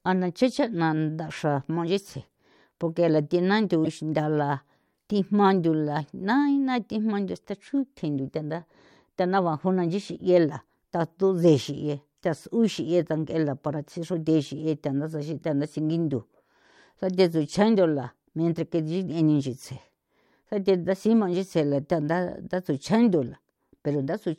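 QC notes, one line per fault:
3.85–3.87 s, damaged data in a compressed stream: a short blip cuts into the speech. Part of the coded stream here is corrupt. The decoder misreads those frames, loses sync and hunts for the next valid frame header, producing the glitch.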